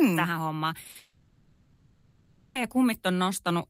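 A speech clip in which the network dropped a run of packets as short concealed packet loss at 0.83, 0.87 and 0.91 s, so the decoder continued the preceding sound, leaving brief smeared, wobbly patches. From 0.97 s to 2.57 s the audio drops out for about 1.6 s, most likely a long network dropout: a fading buzz or hiss continuation fills the gap before speech resumes with that stretch missing.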